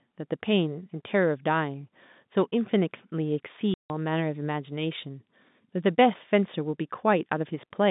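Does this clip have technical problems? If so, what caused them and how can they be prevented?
Yes. At 3.74 s the speech drops into dead silence for 160 ms, returning at 3.9 s, with hard edges where the audio stops and restarts abruptly. This is packet loss filled with silence. A run of consecutive packets never arrived, and the receiver played nothing in their place. The gap's length fits eight lost 20 ms packets. Surrounding the hole, the sound is narrowed to the telephone band of G.711 coding, roughly 150 Hz to 3.7 kHz. Enabling packet loss concealment and a jitter buffer at the receiver, or forward error correction on the link, would prevent such holes.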